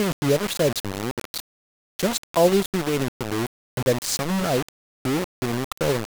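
From start to finish the speech carries a harsh, grainy distortion that rises and falls with the voice, thickest on soft syllables, while the quietest moments sputter or collapse to silence. The error sits only around 10 dB below the speech. This is low bit depth without dither, likely the result of rounding the waveform onto a very coarse grid, which fits 4 bits. With no dither, the rounding error tracks the signal instead of becoming steady hiss.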